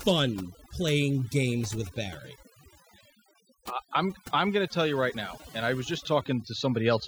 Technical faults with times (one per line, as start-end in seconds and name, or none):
0.00-7.08 overdone noise removal